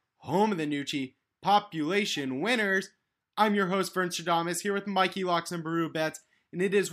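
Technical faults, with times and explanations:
No technical faults can be heard anywhere in this speech clip. Nothing in the recording calls for a time or an explanation.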